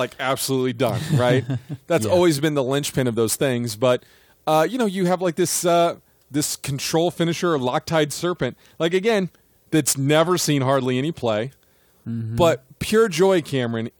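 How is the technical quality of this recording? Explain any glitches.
The recording has one real problem, and it runs the whole way through. Crude rate conversion is laid over all of the speech: a gritty, inharmonic fizz that rides on the louder and brighter sounds. The pattern fits a 44.1 kHz to 48 kHz change done by simply repeating the nearest sample, with no filtering. That slips in a regular stair-step error, roughly 25 dB below the voice, producing tones unrelated to the speech.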